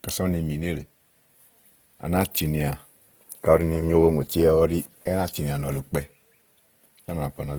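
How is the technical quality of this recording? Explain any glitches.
The recording has clearly audible codec damage from start to finish. Throughout the speech the sound turns rough and grainy, with a noisy hiss riding on voiced sounds, likely from Opus compression in its music (CELT) mode at a low bitrate, around 16 kbps. Short of bits, the encoder preserves each band's energy but fills detail with noise or folded copies of lower bands. A spectrogram shows a dense, speckled texture extending to about 20.2 kHz, with few empty holes.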